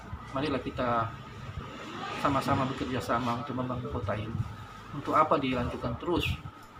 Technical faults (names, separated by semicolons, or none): corrupt frame decoded